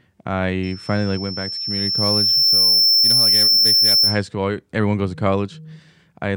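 A thin, piercing whistle at about 5.4 kHz rises out of the speech at 0.63 s, swells over roughly two seconds until it sits a little louder than the voice, and holds until it cuts off at 4.26 s. This is loudspeaker feedback squeal: the microphone is hearing the loudspeaker it drives, and at that one frequency the loop gain climbs past unity, so the tone keeps feeding itself until the loop is broken.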